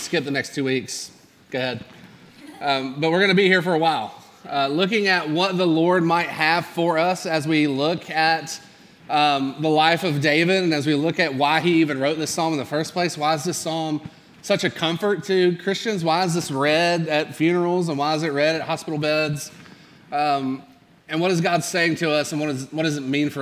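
Nothing in this clip stands out as a technical fault. The sound holds steady throughout, with no moment that calls for comment.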